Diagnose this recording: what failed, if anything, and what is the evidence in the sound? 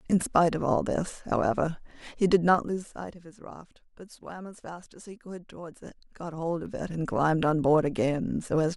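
Zipper noise from a gain stage applied per buffer in the playback or processing chain. From 2.48 to 3.24 s the speech drops by around 15 dB in audible 3 dB steps, roughly seven a second, each leaving a small tick. From 5.68 to 7.21 s it climbs back about the same amount, more slowly, around four steps a second. Unlike a smooth fader move, the level jumps instead of gliding, and the ticking stops once the level settles.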